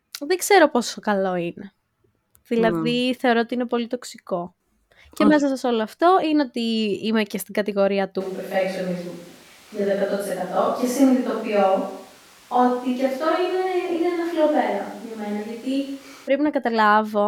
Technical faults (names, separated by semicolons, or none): switch to a distant microphone